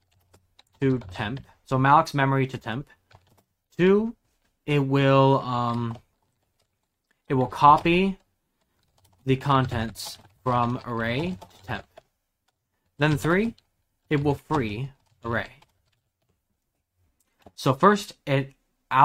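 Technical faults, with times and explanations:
Nothing technical stands out anywhere in this one, so there's nothing to list.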